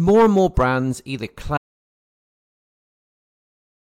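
Right after "and more brands either", at 1.58 s, the speech cuts to total silence with no room tone through the end: an audio dropout to silence, likely lost input.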